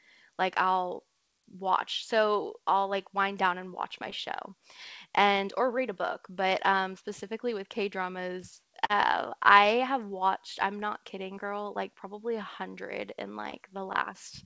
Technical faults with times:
4.10-4.14 short concealed packet loss
8.86-8.91 short concealed packet loss
11.35-11.38 short concealed packet loss
13.50-13.54 short concealed packet loss

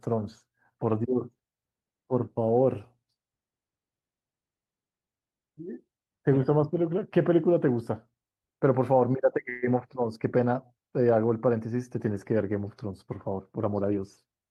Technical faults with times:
9.49-9.64 call audio freeze
13.30-14.40 jitter buffer speed-up

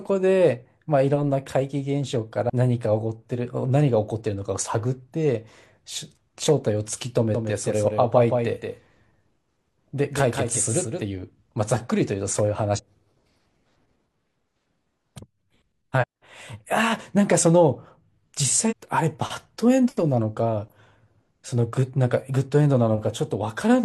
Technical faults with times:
2.45-2.50 damaged data in a compressed stream
7.35-11.03 doubled audio track
12.74-12.80 damaged data in a compressed stream
15.98-16.04 damaged data in a compressed stream
18.67-18.73 damaged data in a compressed stream

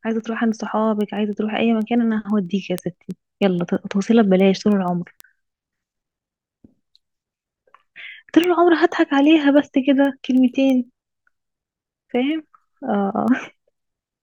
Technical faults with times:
0.20-14.09 word clock ticks

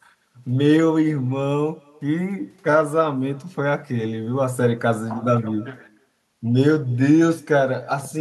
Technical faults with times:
0.00-8.20 echo with no canceller

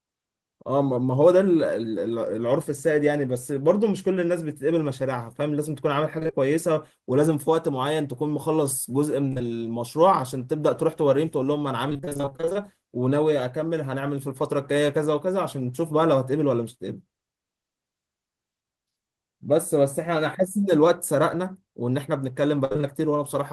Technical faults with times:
6.19-6.35 repeated packet loss (robotic sound)
9.29-9.41 short concealed packet loss
11.89-12.57 repeated packet loss (robotic sound)
22.65-22.85 repeated packet loss (robotic sound)

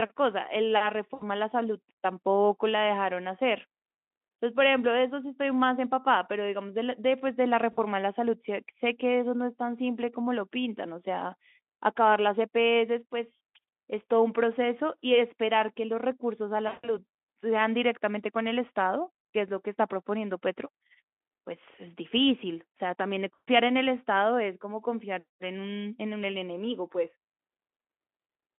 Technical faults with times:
1.13-1.23 VoIP packet loss concealed by the speech codec
7.71-7.84 VoIP packet loss concealed by the speech codec
16.67-16.94 VoIP packet loss concealed by the speech codec
23.34-23.49 VoIP packet loss concealed by the speech codec

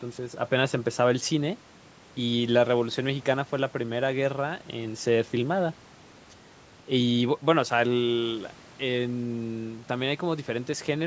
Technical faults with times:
none

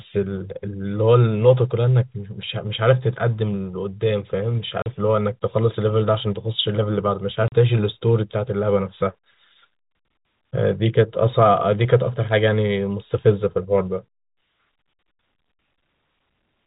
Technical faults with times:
4.82-4.86 packet loss filled with silence
7.48-7.52 packet loss filled with silence

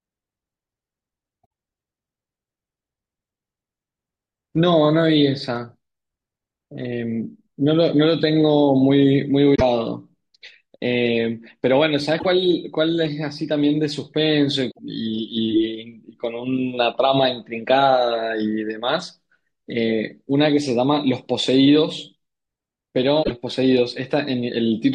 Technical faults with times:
1.43-1.45 damaged data in a compressed stream
9.54-9.62 damaged data in a compressed stream
12.16-12.26 damaged data in a compressed stream
14.68-14.79 damaged data in a compressed stream
23.20-23.31 damaged data in a compressed stream

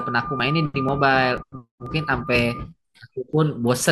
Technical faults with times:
0.40-3.82 periodic USB or driver dropouts

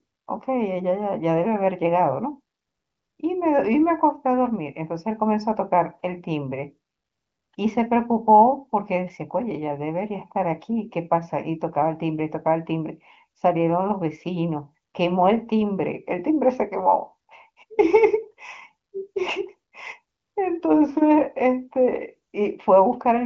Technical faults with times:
none

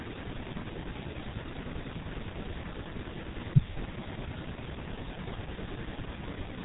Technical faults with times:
0.00-6.65 G.723.1 codec

